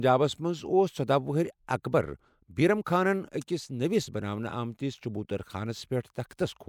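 No technical faults are audible.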